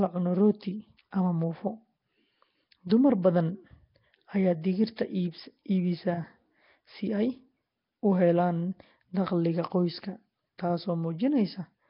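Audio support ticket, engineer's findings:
Rough, hissy halo and smeared, underwater speech throughout. Nothing above 5.3 kHz. Likely Nellymoser compression: starved bands noise-filled, sound fitting a bitrate near 22 kbps.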